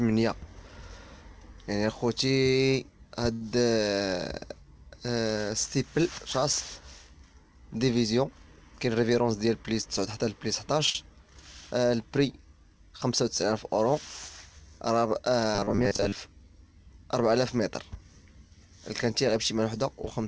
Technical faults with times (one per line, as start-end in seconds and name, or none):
3.33-3.42 short stall from a late packet
8.76-9.87 jitter buffer speed-up
10.86-10.89 short stall from a late packet
10.90-10.95 burst of packet loss
15.55-16.15 robotic sound from repeated short buffers